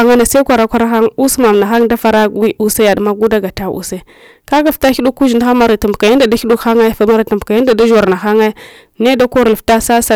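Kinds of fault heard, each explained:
Hard clipping: the speech is driven about 12 dB beyond what a stage in the chain can pass, so its waveform peaks are sliced flat, and roughly a tenth of the samples sit pinned at the ceiling. Those squared-off tops generate harmonics high in the spectrum, heard as a harsh fuzz on every loud syllable throughout the clip. Unlike soft saturation, the distortion arrives abruptly at the limit rather than thickening gradually as level rises.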